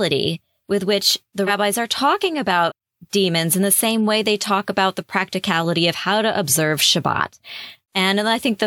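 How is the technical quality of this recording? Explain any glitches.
Two quick skips where compressed frames were skipped, at 1.47 to 1.5 s and 2.67 to 2.72 s. Each time about one frame, 46.4 ms long, never got decoded, so the speech jumps ahead roughly 50 ms.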